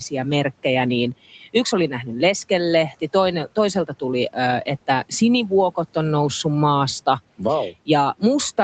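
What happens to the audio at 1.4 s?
The noise suppressor mistook part of the speech for background noise between 1.30 and 1.54 s and pulled it down along with the room noise, by about 12 dB at its deepest. Over roughly 150 ms the speech sounds swallowed and faint.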